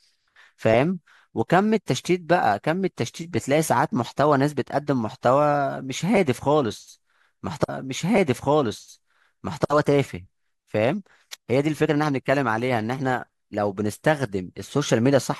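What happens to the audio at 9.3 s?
At 9.3 s the speech is inside a stream segment repeated, running from 7.68 to 9.68 s: the player queued the same segment twice, so about 2.0 s of programme plays again, with a small blip audible where playback jumps back.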